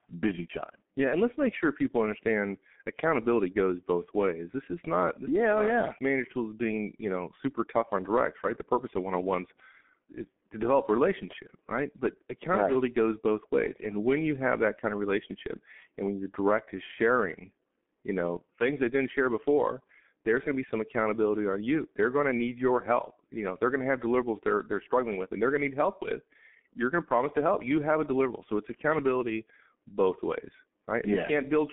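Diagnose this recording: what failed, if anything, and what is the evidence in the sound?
Codec fault: heavy G.723.1 damage throughout. The speech stops near 3.7 kHz and sounds muffled and hoarse, as slow 30 ms frames smear consonants, fitting a 6.3 kbit/s mode.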